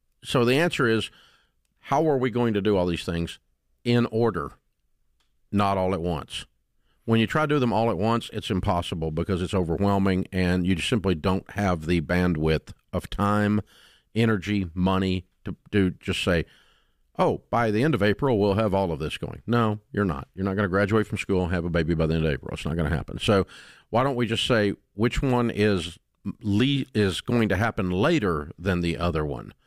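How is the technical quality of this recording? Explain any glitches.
There are two small glitches, both the same kind of fault. At 6.34 s, right after "not all at", and again at 23.27 s, after "not going to happen", you get a dropped buffer (overrun). Each one is a quick jump, with the speech skipping straight ahead instead of pausing. This is likely the recording software not grabbing its samples in time, so the hardware wrote over them. The first loses just a few milliseconds, and the second loses around 15 ms, so it's a longer skip.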